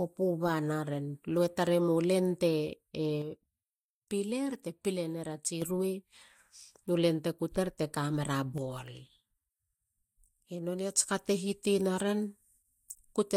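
From 3.22 to 5.62 s, and again from 8.58 to 10.98 s just before "ka te", the speech steps down by about 6 dB and then snaps back, likely one channel dropping out before the mono sum. Unlike a fade, each drop is instant and halves the amplitude.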